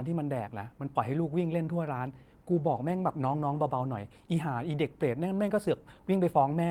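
From 2.56 s to 4.13 s there is a call bitrate drop: the call's bandwidth estimate fell and the encoder was given far fewer bits. The character of the degradation fits a fall from about 32 kbps to about 18 kbps, held at the lowest rate for roughly 1.5 s. With fewer bits the speech is coded more coarsely, so it turns rougher and less detailed until the rate recovers near 4.13 s.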